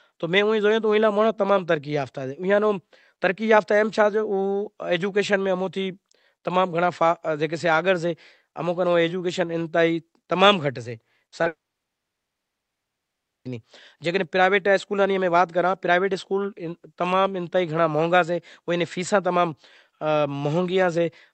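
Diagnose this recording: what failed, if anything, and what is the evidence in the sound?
Between 11.30 and 11.46 s, the speech turns choppy: repeated packet loss (robotic sound) at the network stage. Four short holes, the longest 20 ms, are bridged by stretching the previous sound, about 31% of that span. The spectrogram shows smeared, repeated frames, and the waveform shows small patches of repeated cycles.

From 11.47 to 13.46 s, the sound gives a brief fading buzz or hiss, then roughly 1.9 s of silence before resuming with material missing. This is likely a long network dropout. The waveform goes flat, and the spectrogram goes blank across the whole band, below the 8 kHz ceiling of the Opus path as well.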